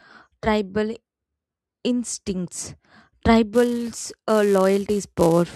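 A filter restarted on every block takes hold at 3.54 s and runs to the end of the speech. Each time a new block starts, the filter loses its stored state and begins again from silence, so every block opens with a tiny transient. Those clicks repeat at 345 Hz, which fits a 128-sample block, and together they form a steady buzz under the voice that grows louder and quieter with the level of the speech.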